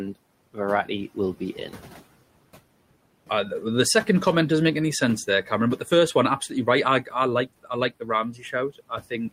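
From 1.53 to 1.77 s, and again from 8.33 to 8.53 s, the speech is cut by the noise suppressor. It mistakes quiet speech for noise and pulls it down, by about 7 dB and then about 9 dB, for roughly a tenth of a second each time. Those sounds go faint and swallowed rather than vanishing. Unlike a dropout, there is no silence or click. The room noise, about 21 dB below the speech, dips with it.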